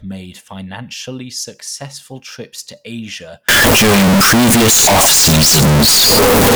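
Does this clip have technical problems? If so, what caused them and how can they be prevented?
Yes. From 3.49 s to the end, the speech turns into a very loud, harsh, near-square waveform at an almost fixed, high level, with background noise as loud as the speech. This is likely a float read as integer: 32-bit float samples interpreted as 32-bit integers. Prevent it by tagging and checking the sample format at every read and conversion stage.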